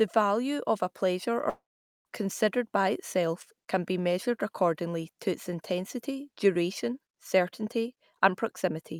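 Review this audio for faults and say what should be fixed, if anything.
Long network dropout, 1.49 to 2.07 s: the speech stops, and the last sound is stretched into a buzzy tail that decays over roughly a tenth of a second before about 0.45 s of silence. About 0.56 s of speech is simply gone, and the talker resumes later without it. This is likely a burst of lost packets, with the receiver's concealment smearing the final frame until it gave up. A larger jitter buffer with forward error correction or redundant packets on the link would prevent this.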